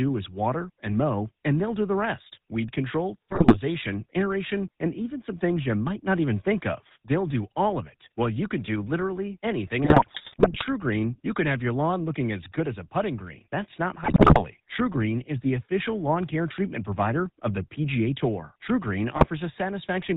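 Speech carried through the GSM full-rate codec for the whole clip, with a coarse, buzzy grit on every voiced stretch and nothing above 4 kHz, which fits the 13 kbps full-rate coder. The roughness sits in the voicing itself, unlike plain band-limiting, which dulls without adding buzz. GSM bit errors break through at 3.30 to 3.57 s, between "the rest weed control" and "aeration and even some", at 9.84 to 10.65 s after "can do literally anything", at 14.04 to 14.44 s and at 19.16 to 19.27 s. Each burst turns the voice into squawks, pops and gargling, with sudden jumps in level and tone, rather than the silent gaps of dropped packets.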